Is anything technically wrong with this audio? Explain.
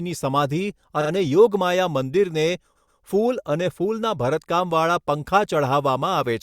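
Yes. The speech stutters twice. Around 1.01 to 1.10 s a 40 ms fragment plays two extra times, and from 2.75 to 2.99 s a 120 ms fragment does the same. These are repeated frames: a run of compressed frames was delivered again and decoded twice more, adding 80 ms and 240 ms.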